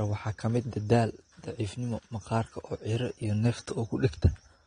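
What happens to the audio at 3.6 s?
At 3.6 s the speech is still carrying the AAC compression damage that runs through the whole clip. The encoder has likely been starved of bits, and the sound fits AAC-LC at around 32 kbps. With too few bits to spend, it throws away everything above 9.7 kHz and quantises the remaining bands coarsely. The result is dull, smeared speech with a warbling, fizzy texture on sibilants and held sounds, plainly audible at that moment.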